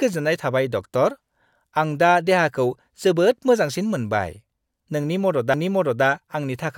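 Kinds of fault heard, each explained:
CD skip: the laser jumped to another turn of the spiral, so around 5.54 s the speech ticks, mutes very briefly, and carries on from a different spot.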